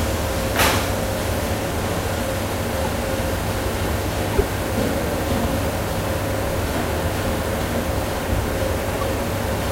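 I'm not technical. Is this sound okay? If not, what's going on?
No. There are three short glitches, each a corrupt frame decoded. The recording was stored in small compressed chunks called frames. A few of these chunks got damaged, and the player played them anyway, so sound landed at the wrong pitches for a moment. Each glitch can come out as a chirp, squeak, blip or burst of noise, or as a brief gap. They happen at 2.84 to 2.87 seconds, 4.33 to 4.41 seconds and 8.94 to 9.03 seconds. Their lengths suggest a few damaged frames each, with the later ones a little longer.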